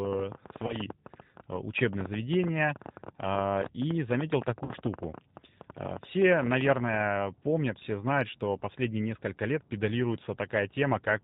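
Speech clip carrying plainly audible G.729 codec damage from start to finish, with the narrow, slightly synthetic quality of the 8 kbit/s G.729A coder. The codec rebuilds each 10 ms frame from a vocal tract filter, a pitch predictor and a handful of pulses, so nothing above 4 kHz survives and the voice sounds rough and synthetic rather than natural. A train of clicks runs from 0.05 s to 7.02 s, ending just before "помнят все знают что". It is an uneven ticking of about 11.3 clicks per second, some seventy in all, with peaks around 10 dB above the speech. The clicks sit over both the voice and the pauses, and their repeated similar shape most likely points to interference or a struggling interface injecting pulses. VoIP packet loss concealed by the speech codec appears at 0.67 to 0.77 s and again at 4.65 to 4.72 s. At those points the decoder had to fill about 20 ms and then about 40 ms of missing audio, which fits the loss of one packet and then two. 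It filled the gaps by extending its last pitch and filter settings at falling gain, so each gap is heard as a brief, fading smear. The voice stays weak and distorted for a short while afterwards as the decoder recovers frame by frame.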